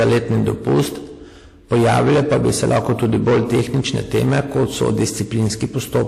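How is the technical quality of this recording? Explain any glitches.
Technical quality is poor: two faults run through the whole speech clip.

Hard clipping is present from start to finish. The level is driven about 16 dB past what the chain can pass, so around a tenth of the waveform is sliced flat. The flat tops add high harmonics, giving a constant harsh fuzz on every loud syllable rather than the occasional crackle of mild overload.

The clip also shows transcoding between lossy codecs throughout. Nothing is present above about 15.1 kHz, and the artefacts of the two codecs are heard together. This is likely a Vorbis encode at 70 kbit/s re-encoded to WMA 1 at 64 kbit/s. The stacked artefact types set it apart from a single low-bitrate encode.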